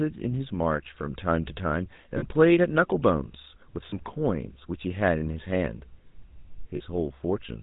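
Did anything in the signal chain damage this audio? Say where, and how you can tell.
Yes. The GSM full-rate codec damages the whole clip at the codec stage. Nothing passes above 4 kHz, and the speech has a buzzy, gravelly roughness, consistent with 13 kbps full-rate coding. A vocal-tract model is driven by regularly spaced pulses that keep only every third excitation sample.

Lost GSM frames occur at 2.18–2.23 s, 3.90–3.93 s and 6.76–6.81 s, a network or transport fault. Each gap becomes a brief rough, metallic ring, because the decoder repeats the last good frame's settings. The gaps' lengths fit one or two lost 20 ms frames.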